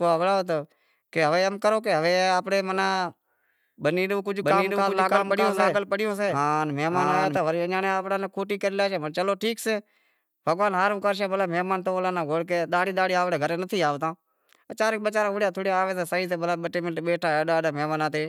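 Speech with a doubled audio track from 4.41 to 7.37 s: an equally loud copy trails by roughly 0.7 s, cutting in and out abruptly with no echo-like decay, likely from a slower second capture path.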